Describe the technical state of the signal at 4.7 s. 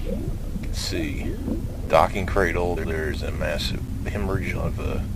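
Nothing is wrong with the signal at 4.7 s; the audio there is intact.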